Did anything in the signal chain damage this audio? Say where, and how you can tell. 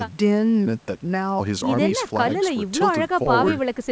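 No, nothing damaged this audio.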